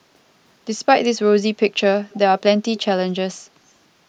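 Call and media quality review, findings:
Echo leak at 2.10–2.18 s and 2.75–2.80 s: faint delayed copy of the speech, 256 ms late, about 30 dB and 25 dB below it. Likely far-end loudspeaker pickup not fully removed by the echo canceller. On a spectrogram this shows as weak, time-shifted replicas of the speech harmonics.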